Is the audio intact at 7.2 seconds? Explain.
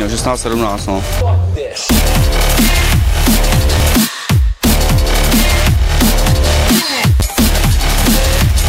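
No. A repeated buffer fault occurs from 7.2 to 7.22 seconds. Fresh audio did not reach the device in time, so it replayed the piece it already held. That piece sounds again twice, with a hard join at each repeat. The repeating unit is very short, which fits a 10 ms buffer. At that size the repeats fuse into a brief buzz or click rather than a clear stutter. About 20 ms of new audio never arrives.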